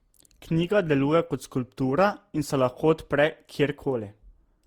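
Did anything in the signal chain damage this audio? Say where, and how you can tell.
Yes, at the codec stage, throughout the speech: generation loss. It sounds swirly, hollow and smeared, with blurred attacks, worse than one Opus pass near 64 kbit/s explains, likely from about seven re-encodes on shifting frame grids. A spectrogram shows smeared onsets.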